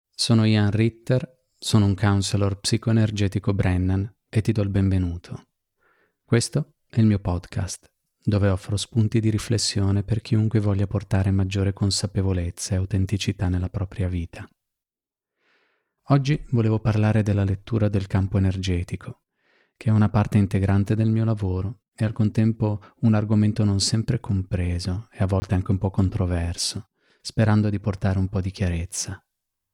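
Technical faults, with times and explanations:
25.40–25.42 s, block of digital silence: the audio cut out for 20 ms after "sempre compreso e a", so the speech drops to silence and returns abruptly, giving a brief hole before "anche un po' controverso".
27.98 s, block of digital silence: a roughly 5 ms stretch of audio was silenced after "po' controverso sperando di", so the hard cut and return merge into a single tick before "un po' di".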